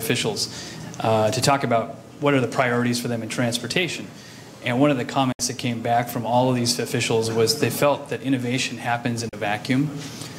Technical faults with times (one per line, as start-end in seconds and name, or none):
5.32-5.40 digital broadcast dropout
9.29-9.33 digital broadcast dropout